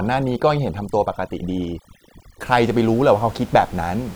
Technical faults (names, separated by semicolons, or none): overdone noise removal